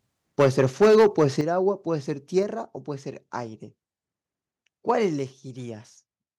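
From 0.39 to 1.24 s the speech runs into microphone overload: peaks sit about 8 dB past the converter's limit, so roughly a tenth of the samples get their tops sheared off, giving the loudest syllables a harsh, crackly edge, likely from the input volume being set too high. Layered on that, the microphone volume is stepped down three times, at 0.42 s by about 2 dB, at 1.41 s by about 8 dB, and at 5.19 s by about 4 dB, each an abrupt drop in voice and background together, likely the call software pulling the device gain back after finding it too loud or clipping.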